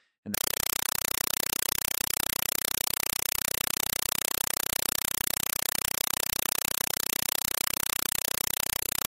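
From 0.34 s right to the end at 9.08 s, the speech is gone and you get a compressed stream played as audio instead. An AC-3 bitstream was passed through as if it were plain samples, never decoded. Every frame comes out as a 4 ms burst of noise then silence, repeating 31.25 times a second, which fits a 192 kbps stream. It sounds like harsh, very loud chattering static.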